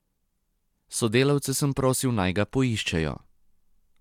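No dropouts, clicks, distortion or timing disturbances occur anywhere in the recording of speech.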